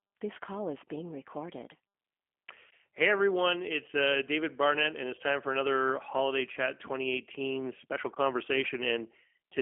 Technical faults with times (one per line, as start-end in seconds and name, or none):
0.00-9.62 G.729 codec